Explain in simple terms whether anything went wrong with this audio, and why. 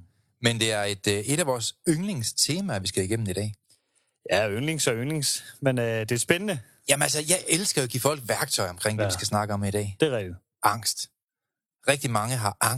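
Nothing went wrong here.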